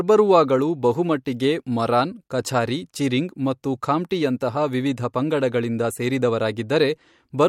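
No technical faults are audible.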